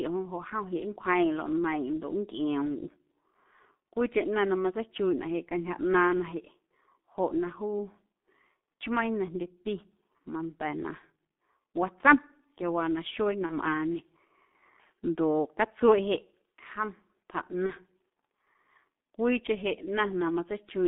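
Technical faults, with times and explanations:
throughout: G.723.1 codec at 6.3 kbit/s with heavy damage; audio confined to about 200 Hz–3.6 kHz, and coarse 30 ms frames leave speech muffled, hoarse, with smeared consonants.
13.46–13.53 s (just after "watsom quiawaa naxuee na") and 17.66–17.74 s: VoIP packet loss concealed by the speech codec; one 30 ms frame lost each time, so the decoder repeats its last pitch and filter at falling gain, producing a short buzzy or noisy, fading smear.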